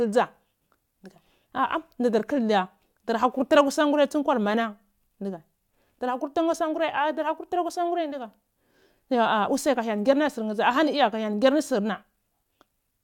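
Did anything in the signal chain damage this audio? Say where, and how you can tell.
No, nothing in the chain from capture through to playback has damaged this speech clip. No stage leaves any audible trace of harm anywhere in it.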